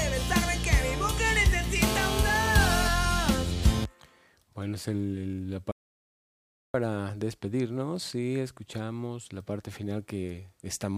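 From 1.82 to 2.88 s a GSM phone buzz cuts across the sound: a hard, raspy tone at about 217 Hz, sitting only about 5 dB below the wanted signal. A nearby 2G handset on a call was pulsing its transmitter at that rate, and the audio circuitry rectified the bursts. It stays nearly steady. On a spectrogram it appears as a stack of evenly spaced horizontal lines, 217 Hz apart, climbing well into the kHz range.

At 5.72 s the audio drops out to silence and returns at 6.74 s, a gap of about 1.03 s. The cutoff is total, with no room tone or residual noise, and whatever sounded in that second is lost. This is likely a lost input, such as a disconnected device, failed link or mute, while recording continued writing silence. The waveform shows a flat line between abrupt edges, and the spectrogram a blank vertical band.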